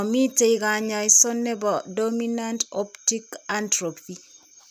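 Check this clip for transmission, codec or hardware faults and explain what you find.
No transmission, codec or hardware faults can be heard in the speech; the signal stays continuous and stable throughout.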